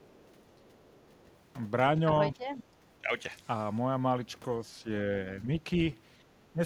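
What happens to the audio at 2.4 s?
An echo canceller likely faced double talk here, with both ends speaking at once, and could not separate the local talker from its own loudspeaker echo, so it suppressed everything it heard. This is speech suppressed in double talk, from 2.35 to 2.48 s. For that brief moment the speech sinks, at its deepest by roughly 10 dB, so the voice briefly ducks away before returning to its previous level.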